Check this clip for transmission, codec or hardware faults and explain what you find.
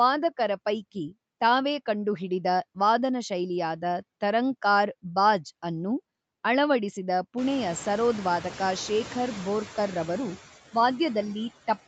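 One fault runs through the whole speech clip: noise suppressor artifacts. The suppressor estimates the steady background and pulls those bands down, by about 19 dB, frame by frame. It is easiest to hear once the room noise swells by about 23 dB around seven and a half seconds in. The noise then dips in the gaps and climbs back under the voice. Low-bitrate codec smearing would sound steadier and would not track speech pauses this way. The top stopping near 8 kHz fits an Opus wideband call path.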